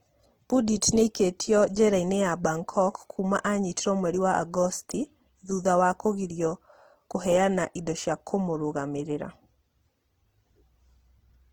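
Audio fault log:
throughout, Opus compression: the speech is plainly rough and grainy, with harmonics turned noisy, though the band still extends to 20.2 kHz. Likely cause: Opus music (CELT) mode starved of bits, consistent with about 16 kbps, filling bands with folded or noise content.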